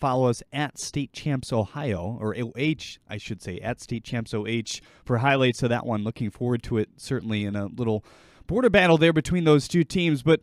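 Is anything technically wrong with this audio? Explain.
No, nothing technically wrong can be heard here.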